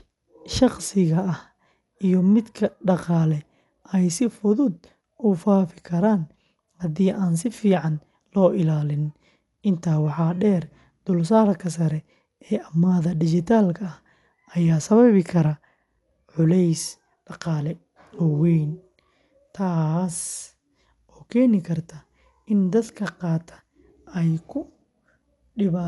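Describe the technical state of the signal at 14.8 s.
At 14.8 s, as across the whole clip, the speech is dull, with nothing above 11.4 kHz and a rough, fluttering noise around tonal parts, likely from Dolby Digital compression at a bitrate near 64 kbps. Starved frequency lines get dither noise instead of detail.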